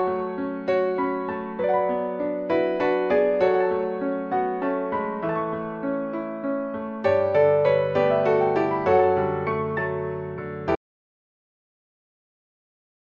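At 10.76 s the audio drops out to silence and stays silent to the end, with no room tone, likely from a lost input or mute.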